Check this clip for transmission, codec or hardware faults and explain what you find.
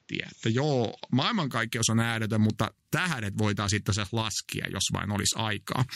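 One fault stands out. From 0.0 to 1.5 s the speech sounds dull and boxy, with nothing above 7.6 kHz and faint extra background noise far below the speech. It opens up cleanly, with no gap or level jump, just before "on ääretön mutta tähdet". This is likely the input switched to a poorer device, a narrower-band input with its own noise that carries the opening second and a half.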